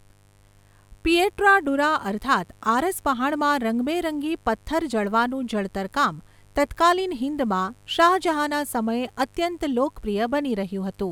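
Mains buzz runs from start to finish, sitting roughly 35 dB below the speech. Sharp switching spikes from the 50 Hz supply leak in twice per cycle, spreading harmonics into the kilohertz range, so a steady, raspy buzz lies under everything.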